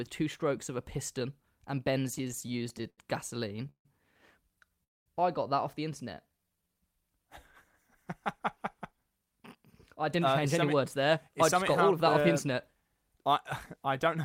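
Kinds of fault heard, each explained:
Repeated stalls (stutter): Packets kept arriving late, so the jitter buffer repeatedly ran dry and the receiver stretched the last sound to cover each wait. Right after "of a piston and", from 2.07 to 2.99 s, the speech catches thirteen times, with fills totalling about 0.2 s and the longest 80 ms. From 3.40 to 3.86 s six more stalls, up to 156 ms, take up over two fifths of that stretch. Nothing is lost, but the flow drags and judders.
Call audio freeze: The likely cause is packets held up in transit long enough to empty the jitter buffer completely. At 4.84 s the sound briefly carries on, then drops to near silence for about 0.21 s before resuming at 5.07 s with "I got that off". The speech picks up exactly where it stopped, so nothing is missing. Instead a pause of roughly 0.22 s has been inserted, and everything after it arrives that much later.
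Jitter buffer slow-down: With its reserve running low, the jitter buffer had the receiver repeat single pitch periods and fragments of pauses to build up audio. After "got that off the", between 6.14 and 6.75 s, the speech plays at about 82% of normal speed while keeping its pitch, gaining about 118 ms. The syllables sound drawn out and slightly sluggish, without the pitch dropping as it would on a slowed tape.
Jitter buffer speed-up: Holding more audio than it needed, the jitter buffer had the receiver cut out short runs of pitch periods to bring the delay down. From 8.76 to 13.34 s the speech runs at about 105% speed, shedding roughly 0.3 s in total. From 13.76 s to the end it runs at about 107%, losing a few tens of milliseconds more. The pitch holds steady, but the delivery sounds slightly hurried.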